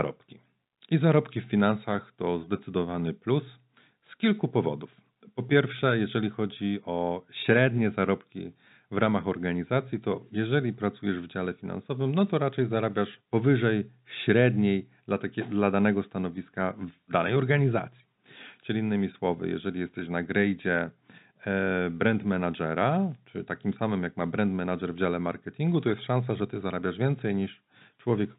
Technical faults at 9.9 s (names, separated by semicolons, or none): none